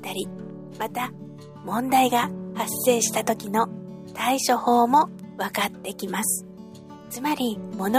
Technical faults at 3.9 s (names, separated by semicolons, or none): none